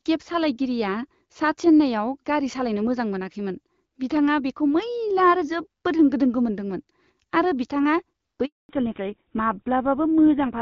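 Speech here, carried over a phone call, and it breaks near the end. At 8.45 s there's a handover gap: the link switched networks, no speech frames got through, and the audio drops out fast and stays silent for 240 ms until 8.69 s, so whatever was said then is gone. Right after that, from 8.69 s to the end, comes a fallback to narrowband. The call left the wideband HD Voice codec, whose clear, lightly coded sound you hear up to that point, for an older codec that fits GSM full rate. Nothing above 4 kHz survives, so the speech goes duller and rougher.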